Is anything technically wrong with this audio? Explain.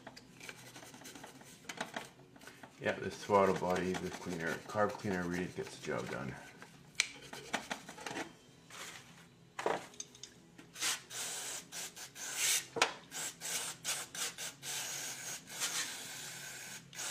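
No, nothing technically wrong is audible in this recording.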